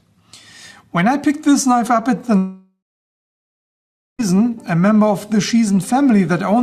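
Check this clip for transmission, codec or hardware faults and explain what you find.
One fault: a long network dropout from 2.37 to 4.21 s. The sound dissolves into a fading buzz, then about 1.4 s of silence, and returns with that stretch lost, likely because packets stopped arriving and concealment ran out. A spectrogram shows a smeared, decaying band, then a blank gap, and the waveform goes flat.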